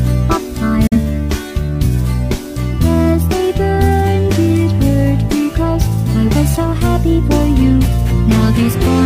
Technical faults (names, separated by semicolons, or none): digital broadcast dropout